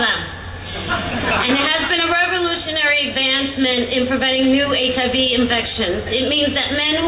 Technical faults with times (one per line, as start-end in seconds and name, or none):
none